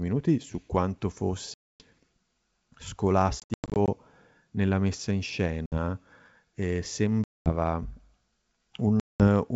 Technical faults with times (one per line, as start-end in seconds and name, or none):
1.54-1.82 packet loss on an ADPCM call
3.40-3.89 packet loss on an ADPCM call
5.66-5.78 packet loss on an ADPCM call
7.24-7.51 packet loss on an ADPCM call
9.00-9.25 packet loss on an ADPCM call